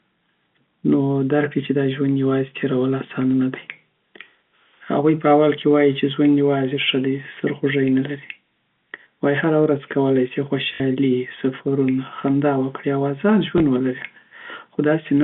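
Packet loss with last packet repeated occurs at 10.74 to 10.80 s and again at 13.58 to 13.60 s. Audio went missing, and the receiver filled each gap by replaying the last piece it had. The first gap is 60 ms, which fits three 20 ms packets, so the same slice loops and briefly buzzes at about 50 Hz. The second gap is 20 ms and is heard as a small blip. The first loop gives a short robotic stutter within the narrow telephone band of the G.711 line.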